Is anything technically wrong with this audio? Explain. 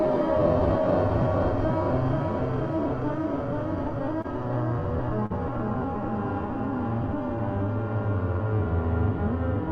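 Yes, there are two spots of short concealed packet loss, at 4.21 to 4.26 s and 5.26 to 5.32 s. Small chunks of the stream, about 20 ms and then 40 ms, arrived too late to decode, so the receiver papered over them by extending the preceding sound for 25 and 40 ms before easing back into the real signal. You hear each as a quick smear or wobble where the audio briefly stops evolving.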